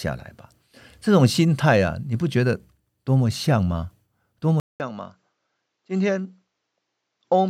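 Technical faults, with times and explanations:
4.6 s to the end: input switched to a poorer device, likely. The speech stops for about 0.2 s at the switch. It returns roughly 10 dB quieter and duller. Nothing is heard above 7.6 kHz, so the top of the sound is cut off and it turns boxy. A faint new background noise sits well below the speech. A poorer input device with a narrower band, its own level and its own background noise took over the recording.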